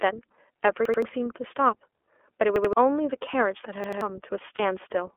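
Throughout, the iLBC codec limits the band to roughly 300 Hz to 3.4 kHz and gives the speech a plainly rough, synthetic edge, which fits its 13.33 kbps, 30 ms frame mode. A repeated buffer occurs at 0.85 to 1.02 s, 2.56 to 2.73 s and 3.84 to 4.01 s. Each time, an 85 ms piece, which fits a 4096-sample buffer, plays twice more with hard joins, heard as a stutter that skips about 150 ms of audio. At 4.55 to 4.60 s, lost iLBC frames, consistent with one missing 30 ms frame, are concealed by a brief held, buzzy sound before the speech recovers immediately.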